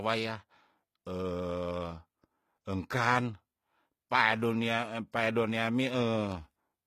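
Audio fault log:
Throughout: HE-AAC compression, plainly audible. The treble sounds fake, with s sounds going gritty and lispy, and nothing above 14.9 kHz. That's likely band replication copying lower bands upward, which fits a bitrate around 20 kbps.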